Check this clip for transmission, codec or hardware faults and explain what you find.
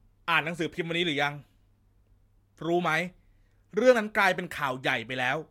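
I find no faults in this clip, so there is nothing to explain.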